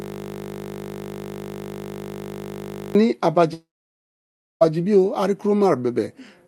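Right from the start, the clip is already caught in a system hang loop that runs until 2.95 s. The machine froze while the audio hardware kept replaying one 20 ms piece of its buffer about 150 times, so you hear a steady 50 Hz buzz.

Then from 3.53 s to 4.63 s there's a gap that's likely a long network dropout. The last sound smears on briefly as a fading buzz, then sits at silence for almost a second, and when audio resumes roughly 1.1 s of material is simply gone. Throughout, the call codec's top end stops around 12 kHz.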